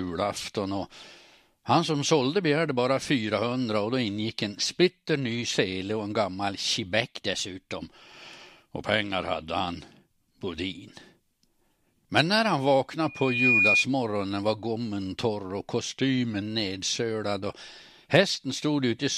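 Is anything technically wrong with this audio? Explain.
Yes. From 7.02 to 7.80 s the speech runs about 5.8% fast and rises about a semitone, and from 15.90 to 16.42 s it runs 5.8% slow and drops about a semitone. Each is likely a drift correction step, where clock-matching software abruptly shifts playback rate to balance its buffer.

From 13.07 to 13.87 s a loudspeaker feedback squeal appears. A 2.4 kHz tone swells in under half a second to about 5 dB above the speech, as the microphone re-amplifies the loudspeaker.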